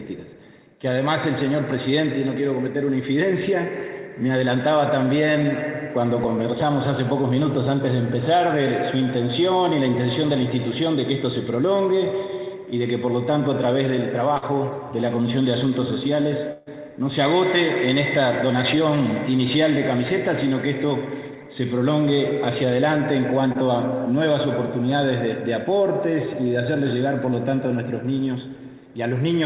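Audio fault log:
7.22–7.25 s and 23.52–23.57 s, short concealed packet loss: about 20 ms of audio failed to arrive in time each time. The receiver extended the preceding sound for 13 ms and 25 ms, respectively, before blending back into the real audio, leaving a brief smear or wobble.
14.37–14.44 s and 16.52–16.68 s, burst of packet loss: consecutive packets were lost, 40 ms and then 140 ms. The receiver continued the last sound and faded it, giving a held buzz or decaying hiss (45 ms and 145 ms), with no silent gap in the second. Playback resumes later, so that stretch is gone. On this band-limited call path, nothing is heard above 4 kHz.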